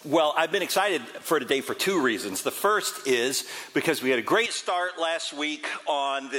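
At 4.46 s the sound changes character abruptly and stays that way to the end. There is no gap at the switch. The top end vanishes, with nothing above about 11.2 kHz. The level falls by roughly 5 dB. A faint new background noise appears, about 45 dB under the signal. The audio turns duller and flatter. This is likely an input switched to a poorer device partway through the recording.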